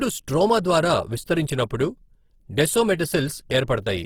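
From start to finish the speech has a rough, grainy texture, and the damage is plainly audible. That's Opus compression, likely running in its music-oriented CELT mode at a very low rate, something like 16 kbps. It keeps the overall energy of each band but runs short of bits and fills the gaps with noise or copied spectrum. Bandwidth still reaches about 20.2 kHz.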